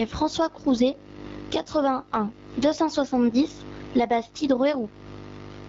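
Right from the start and all the way through, there's gain pumping on this speech. The gain ducks by something like 20 dB the moment a loud syllable lands, then comes back up. That's likely a fast limiter or compressor clamping down on input gain that's set way too hot for the mic. Loud and quiet passages end up squashed close together, and the light coding damage from the HD Voice AMR-WB path sits underneath it all.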